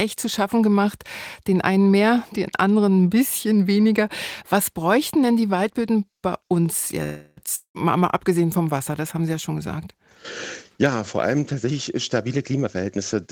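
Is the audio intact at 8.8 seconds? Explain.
Yes, at 8.8 seconds the speech plays through intact, with no audible fault at that point.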